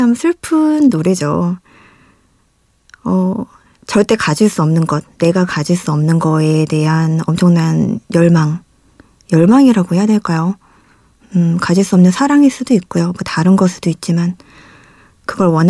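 No technical faults are audible anywhere in the recording.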